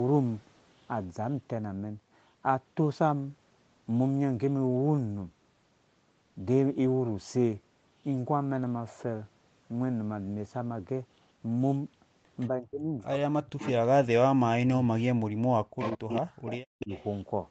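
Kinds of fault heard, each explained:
Echo leak: a copy of the sound trailing 172 ms behind, about 30 to 10 dB down, likely from incomplete echo cancellation; spectrogram shows ghost harmonics shifted later.
Speech suppressed in double talk: in three stretches between 12.5 and 16.9 s the level drops by up to about 40 dB, likely echo suppression during overlap; waveform shows sudden hollow gaps.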